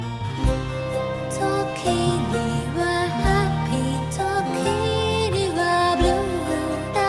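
Nothing stood out as a technical fault on listening to this audio.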